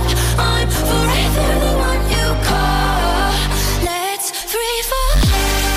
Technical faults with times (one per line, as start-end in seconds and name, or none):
0.00-5.76 hard clipping